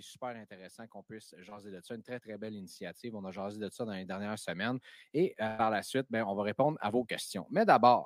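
Automatic gain rising runs from 0.2 s to 7.8 s: the gain control judged the input too quiet and slowly lifted it about 14 dB, so speech and background swell together. A short concealed packet loss at 1.49 to 1.53 s leaves a brief smear where roughly 20 ms never arrived and the receiver extended the preceding sound before blending back. A burst of packet loss at 5.47 to 5.61 s drops about 120 ms; the receiver stretches the last sound into a fading hold, then the speech resumes with that stretch missing.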